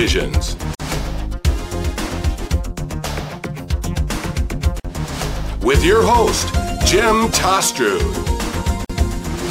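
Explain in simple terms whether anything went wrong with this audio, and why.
The sound briefly drops out three times, at 0.75, 4.80 and 8.85 seconds, each for just under 50 milliseconds. This is a gap at a join of encoded pieces. The audio was saved in separate 4-second chunks. Each chunk's silent padding stayed in when they were stuck together.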